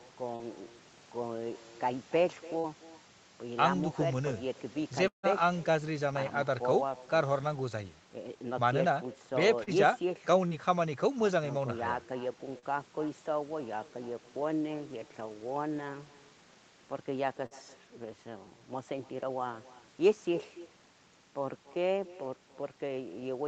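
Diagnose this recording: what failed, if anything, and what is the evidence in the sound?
The far end has no working echo canceller, so this is a call-processing failure. Its loudspeaker output reaches its microphone and returns across the network. Throughout the speech, every phrase is followed roughly 300 ms later by a fainter, thinner copy about 19 dB below the direct sound. That delay is the full round trip. Since nothing subtracts the returned signal, the shadow sits under every utterance for the whole clip.

Short concealed packet loss on the network leg causes brief smears or wobbles at 0.35, 2.59, 9.63, 10.47, 12.59 and 17.46 s. Each time, about 40 ms of audio missed the jitter buffer. The Opus decoder's concealment extended the preceding sound across the gap for 33 to 44 ms and then crossfaded back into real audio. The patch is short but audible, and a brief consonant in that window can disappear.

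A long network dropout is the likely cause of the gap from 5.08 to 5.26 s. About 160 ms of audio never arrived. The decoder first stretched the last sound into a decaying buzz or hiss, and for most of that span it fades to near silence. The speech then resumes further along, with the lost segment skipped rather than delayed. The band-limiting at 8 kHz from the call codec is normal for this path and is not part of these faults.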